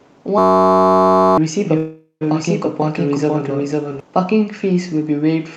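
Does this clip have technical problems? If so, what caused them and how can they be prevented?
Yes. From 0.38 to 1.38 s there is a system hang loop: the system froze while the sound hardware kept replaying one 10.67 ms slice of its buffer. The result is a steady 93.8 Hz buzz, which fits a 512-sample buffer, and roughly a second of real audio is lost. To prevent this, give the audio thread real-time priority and have a watchdog mute output when the buffer stops being refilled.

From 1.6 to 4.0 s there is a doubled audio track, likely caused by the same sound being captured twice through a slower second path. A dry full-band copy at about the same level trails the original by roughly half a second, and it starts and stops abruptly. To prevent this, make sure only one capture route feeds the mix, or remove the duplicate track during editing.

From 1.77 to 2.23 s there is a call audio freeze, likely caused by packets stalling and the jitter buffer running dry. 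The receiver stretches the last sound into a fading buzz for 435 ms, including about 100 ms of near-silence, then resumes exactly where it stopped, with nothing skipped. To prevent this, use a steadier network connection or a larger adaptive jitter buffer.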